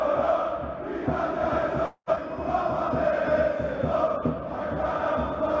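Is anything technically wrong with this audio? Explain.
Yes, there are two timing faults close together, heard through a call codec whose output stops at 8 kHz, consistent with G.722.

From 1.86 to 2.09 s there is a call audio freeze. The jitter buffer likely ran dry while packets were held up, so the receiver stretched the last sound into a fading buzz lasting about 215 ms, with the final 70 ms silent. Playback then resumes where it stopped, with nothing lost. On a spectrogram the last spectral frame smears into flat horizontal bands that fade, then a short blank column. On the waveform the envelope decays to a flat line.

From 2.15 to 2.18 s the audio skips ahead. With later audio already queued, roughly 150 ms was discarded, and the two sides were joined with only a 10 ms fill. It sounds like an abrupt jump, with a fragment of sound missing. On a spectrogram the patterns change suddenly at a vertical seam, and the waveform shows an uneven splice rather than a smooth continuation.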